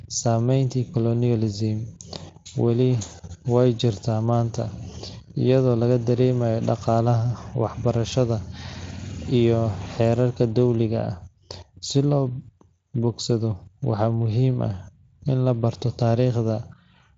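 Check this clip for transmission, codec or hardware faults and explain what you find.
No faults detected.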